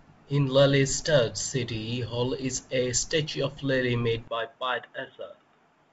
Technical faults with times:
4.28-5.93 input switched to a poorer device

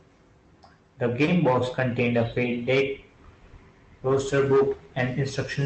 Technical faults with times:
1.25-1.29 short concealed packet loss
3.47-3.53 short concealed packet loss

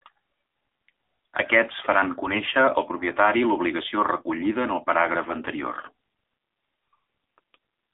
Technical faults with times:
0.00-7.93 AMR narrowband mobile codec
2.22-2.51 AMR bit errors
7.62-7.74 AMR bit errors

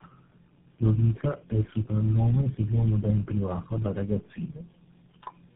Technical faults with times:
0.00-5.56 tandem speech coding

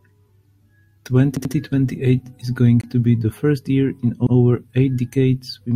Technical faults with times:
1.37-1.54 repeated buffer
2.81-2.84 Bluetooth stall
4.27-4.35 repeated buffer

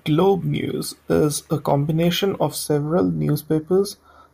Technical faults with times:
2.64-4.33 channel delay (comb filtering)

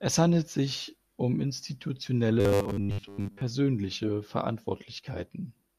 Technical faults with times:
2.40-3.42 robotic sound from repeated short buffers

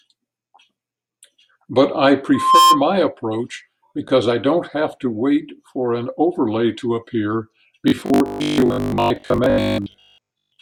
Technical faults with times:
2.34-2.81 loudspeaker feedback squeal
7.88-10.60 robotic sound from repeated short buffers

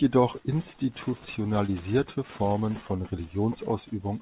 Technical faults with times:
1.66-1.70 short concealed packet loss

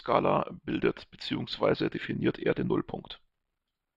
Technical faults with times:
0.00-3.97 channel delay (comb filtering)

